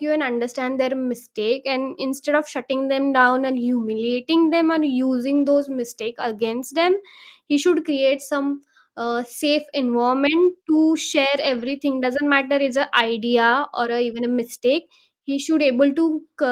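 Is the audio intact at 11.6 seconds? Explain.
No. From 11.41 to 11.71 s packets were lost, and the decoder rebuilt them from the low-bitrate copies carried in the following packets (a lost packet rebuilt from error correction). There is no gap, but the speech turns rougher and noisier through that stretch.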